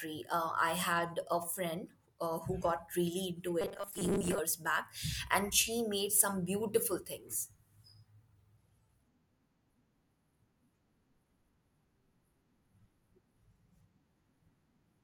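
From 3.61 to 4.39 s the speech takes on robotic sound from repeated short buffers. The voice becomes a rigid, metallic buzz pitched at 200 Hz while still loosely tracking the words. The likely cause is audio arriving too slowly, so playback loops its last 5 ms chunk to fill gaps, with roughly half of the stretch made of such repeats. A spectrogram shows evenly spaced horizontal harmonics of 200 Hz, and the waveform shows identical short cycles.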